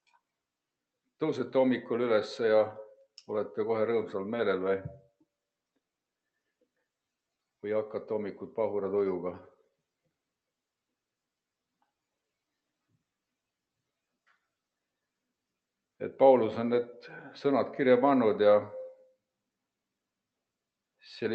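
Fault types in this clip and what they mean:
No faults can be heard anywhere in this audio. It passes through a WebRTC call path with Opus, and the top end stops at about 8 kHz, which fits a wideband setting of around 32 kbps.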